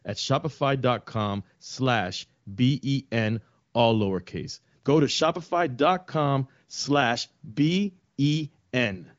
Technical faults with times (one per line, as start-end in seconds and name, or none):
none